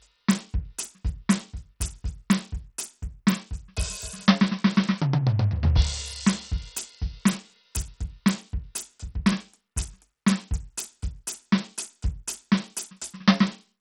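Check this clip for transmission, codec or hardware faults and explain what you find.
Throughout the music, the treble flickers, nothing sounds above 16.9 kHz, and a gritty, metallic haze rides on everything. This likely comes from Bluetooth SBC compression at a starved bit budget, fitting about 64 kbps: the top sub-bands get almost no bits and the rest are coarsely quantised.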